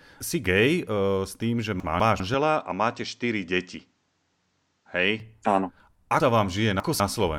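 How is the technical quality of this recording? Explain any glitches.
The recording has three clear glitches: two spots where the audio plays out of order, and a stretch in the middle where the sound goes duller.

At 1.8 to 2.2 s, and again at 6.2 to 7.0 s, there are chunks out of order. These are 200 ms blocks that got written late and play after material that should follow them: one block late in the first spot, three in the second. Nothing's missing, but you hear a jumbled moment at the hard joins.

From 2.34 to 5.2 s the top end disappears, with nothing above 8.2 kHz, and a faint new noise floor appears about 50 dB under the signal. There's no gap and no real level jump. That's likely the input switched to a poorer device mid-recording, with a narrower band and its own noise.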